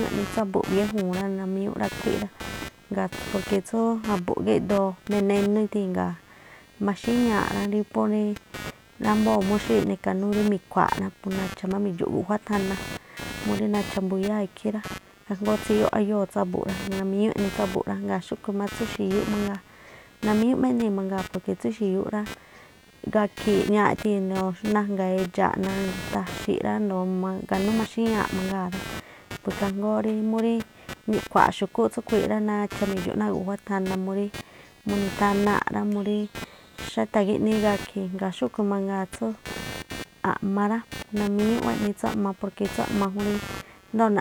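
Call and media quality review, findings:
Computer activity noise throughout: buzzing near 200 Hz, roughly 15 dB under speech, rising and falling with PC load via shared audio ground, not steady like mains hum.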